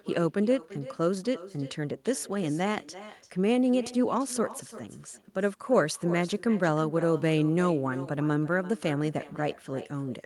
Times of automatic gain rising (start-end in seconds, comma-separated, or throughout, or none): none